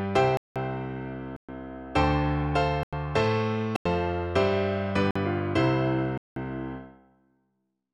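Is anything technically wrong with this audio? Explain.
Yes, the audio has six blocks of digital silence, at 0.37, 1.36, 2.83, 3.76, 5.11 and 6.18 s, lasting 186, 122, 93, 93, 46 and 186 ms. The output buffer likely went unfilled, which fits whole buffers of 2048 to 8192 samples, so the sound drops abruptly to silence, leaving short holes.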